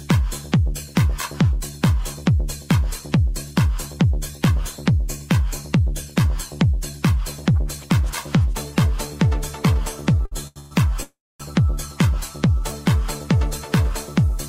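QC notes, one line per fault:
10.25–10.33 s and 10.47–10.58 s, short stall from a late packet: a packet arrived behind schedule, the jitter buffer emptied, and the receiver held the last sound for 60 ms and then 84 ms before resuming where it stopped. Nothing is lost; the sound just drags with a slight buzz or dip. On a spectrogram the held frame shows as flat horizontal streaks. The waveform repeats near-identical cycles across each stretch.
10.60–10.73 s and 11.03–11.42 s, call audio freeze: the audio locks up, most likely because packets were held up in transit and the jitter buffer ran dry. The first freeze fills 112 ms with a continued, fading buzz or hiss. The second fills 366 ms, fading into about 250 ms of silence. Playback then picks up where it left off, so the material is delayed rather than missing. The spectrogram shows smeared bands thinning into a blank column, and the waveform decays into a flat line.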